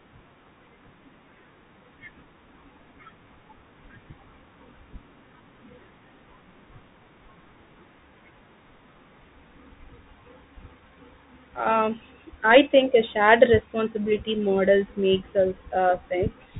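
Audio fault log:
throughout, Bluetooth CVSD headset codec: The speech is narrowband and plainly damaged, with nothing above 4 kHz, which fits a 64 kbps CVSD headset link. Each sample is coded as a single up-or-down bit, and the step size adapts to follow the waveform. Loud, fast-rising high content outruns that step and distorts, s sounds turn scratchy, and a granular hiss from the constant stepping sits beneath the speech.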